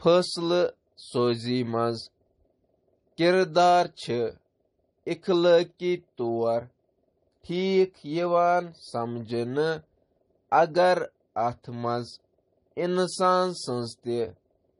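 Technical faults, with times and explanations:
throughout: transcoding between lossy codecs. Speech is dull, with nothing above 10.6 kHz and layered smeary artefacts, likely from a low-bitrate MP3 re-encoded as AAC.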